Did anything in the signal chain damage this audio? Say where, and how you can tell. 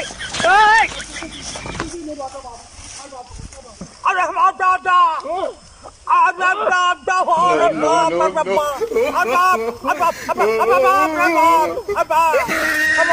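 Yes. Imaging from sample-and-hold upsampling from 22 kHz to 48 kHz, 8.57 to 12.86 s, adds metallic fizz about 22 dB down. A spectrogram shows mirrored bands above 11 kHz around 22 kHz.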